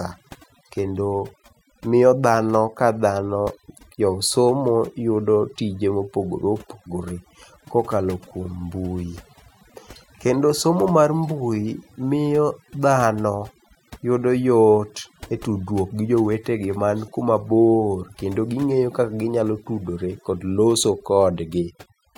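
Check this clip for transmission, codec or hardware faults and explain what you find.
The one problem here isn't transmission or hardware; it's processing. Overdone noise removal runs through the whole speech clip. A noise reducer was pushed too hard, so whenever a frequency band dips close to what it thinks is noise, it gets pulled way down or shut off, and the quieter parts of the voice get caught too. You hear it as a background that drops and breaks up into little twinkling specks.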